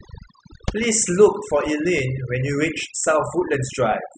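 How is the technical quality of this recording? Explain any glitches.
The recording is speech with one fault that runs through the whole clip: overdone noise removal. A noise reducer set too aggressively has been pushing individual frequency bands down or off wherever they sit close to its idea of the noise floor. The quieter parts of the voice are taken out along with the noise. Between phrases the background drops and breaks up into twinkling, warbling specks. On a spectrogram the gaps look unnaturally black, with scattered isolated dots, and the speech harmonics appear patchy and ragged at their edges.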